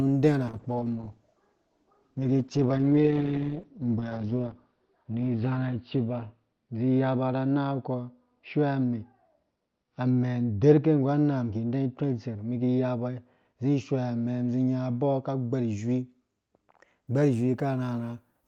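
From 0.49 s to 17.13 s the speech turns rough and muffled, with the top end missing. This is a call bitrate drop: the encoder fell from 32 to 8 kbps, narrowing bandwidth from 20 kHz to 6 kHz and staying lowest for about 4.5 s.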